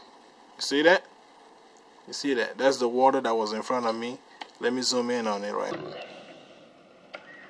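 From 5.71 s to the end at 7.50 s, the audio suffers a wrong sample rate fault: samples are played back slower than they were captured, with no rate conversion, which fits material recorded at 32 kHz being played at 22 kHz. Speed drops to about 0.69 times and pitch falls by about 6.5 semitones, so the sound turns sluggish and dark. On a spectrogram, every feature shifts downward and stretches in time, and the content tops out near 11 kHz.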